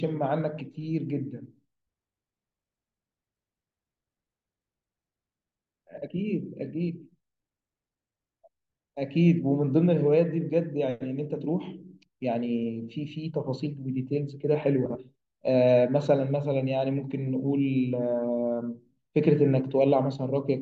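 Frames out of order at 5.97 to 6.08 s and 14.85 to 14.96 s in this speech recording: two adjacent 48 ms runs, consistent with two frames each, play with their halves swapped, giving a brief garbled flutter, and no time lost.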